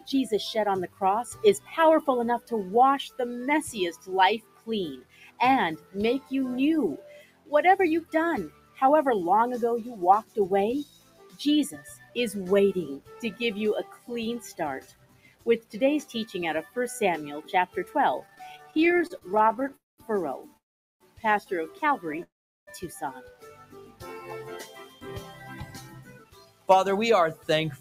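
A distortion runs through the whole clip. It is rough on every sound, and the pauses are not clean. They fill with a hiss that should not be there. That pattern points to a stuck bit, likely one data line or converter bit held at a fixed value. About half the samples are then off by that bit's weight. Because the error flips with the sign of small values, quiet passages turn noisy.

A speech-style noise suppressor is also working on audio it was not built for. It treats steady tones, ambience and reverb as noise and pulls them down. The level swings by about 15 dB. Onsets get through, but held sound and tails sink. The result pumps and thins out across the whole clip.

In places the noise suppressor cuts the sound outright. From the start to 8.81 s it pushes sustained and decaying parts down by up to about 15 dB, roughly three seconds in total. From 10.23 s to the end it does the same, reaching about 16 dB. 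Sudden sounds survive. Fading ones lose level and their decays end early.

From 18.19 s to 20.57 s the audio stutters in repeated stalls. There are 39 small gaps, the longest 34 ms, and 437 ms is filled in all, about 18 percent of that span. A shorter run follows from 22.12 s to 22.23 s, with three gaps of up to 12 ms. Each time, late packets left the jitter buffer empty. The receiver stretched the last sound until data came back. Nothing is lost, but the flow drags and catches.

Three longer call audio freezes sit in the same area. They fall at 19.76 to 20.00 s, 20.57 to 21.02 s, and 22.23 to 22.69 s. They last about 221 ms, 435 ms and 441 ms, and are mostly silent. The likely cause is packets held up in transit. The receiver held the last sound, which faded out, then resumed where it stopped. So a gap is inserted, not content removed.

From 25.0 s to 27.6 s a jitter buffer speed-up follows. 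The receiver has a backlog after those delays and trims short pitch-period pieces, about 100 ms in all. The audio runs at 104 percent with unchanged pitch, and any steady rhythm loses its pace.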